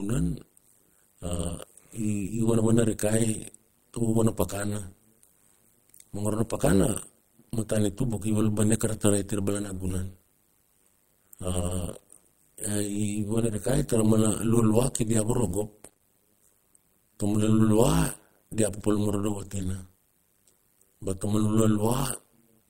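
Overlap-add ripple runs through the whole speech clip: the windowed frames were rejoined with an overlap that fails to sum to constant gain, so the level swings by about 60 dB once per frame, roughly a hundred times a second, giving a metallic buzz with extra tones around each note.

Repeated packet loss (robotic sound) strikes from 15.85 to 16.02 s, where three short holes, the longest 23 ms, are each patched by extending the preceding sound. Nearly two-fifths of that span is concealed, leaving a choppy stutter with fragments missing.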